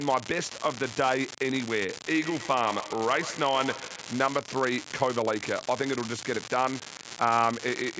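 An unreliable data bit runs through the whole clip, from the first sample to the last. One line carrying the sample data is marginal, so its bit flips in a random share of samples, and every flip adds a spike of identical size to the waveform. The result is a constant fine crackle or fizz laid over the speech. It carries on unchanged in the pauses, where there is nothing to mask it.

Feedback echo between two devices appears from 2.1 s to 4.35 s. Two devices in the same room are joined to one call. One plays back what the other's microphone captured, and that microphone picks the playback up again. Each device's echo canceller removes only its own output, so this loop survives. The speech returns at a steady interval of roughly 150 ms, each pass thinner and more ringing, with the loudest repeat about 13 dB below the speech.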